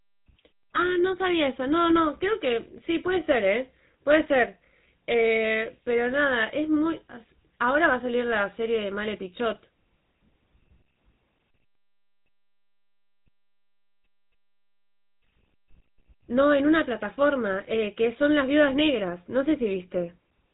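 GSM full-rate codec damage runs through the whole speech clip, with nothing above about 3.8 kHz. The codec rebuilds the voice from a vocal-tract model excited by coarse regular pulses, giving a plainly audible buzzy, gravelly roughness that fits a 13 kbps telephone channel.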